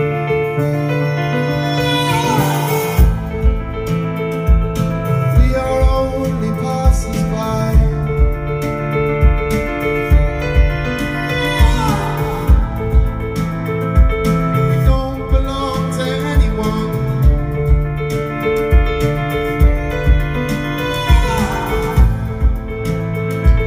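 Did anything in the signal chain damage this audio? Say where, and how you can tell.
No, nothing along the chain audibly damaged this audio. No stage, from capture through to playback, leaves a trace anywhere in the clip.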